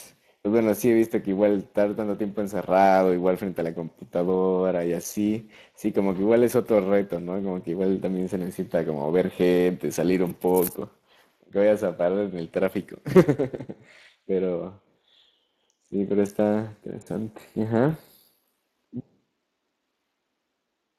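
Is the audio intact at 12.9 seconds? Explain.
No. At 12.9 seconds the speech carries Speex codec damage, which runs through the whole clip and is plainly audible. Speex is a CELP coder that models the voice and spends limited bits on the excitation signal, so the speech here turns grainy and hoarse, which fits a bitrate around 22 kbps. Nothing is present above 15.2 kHz. Transform codecs such as MP3 would give swirling, metallic smearing rather than this rough, hoarse texture.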